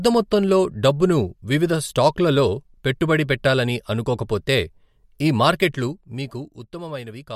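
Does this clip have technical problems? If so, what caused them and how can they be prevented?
Yes. Between 5.53 and 6.67 s, a gain change was applied in unsmoothed 2 dB jumps, around seven per second, lowering the level by roughly 10 dB. Each jump leaves a small click, so zipper noise ticks along on the speech as it fades. Ramping the gain smoothly sample by sample, or interpolating it across each buffer, prevents this.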